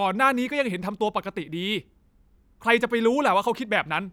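No technical faults can be heard anywhere in the speech, so there is nothing to place in time order.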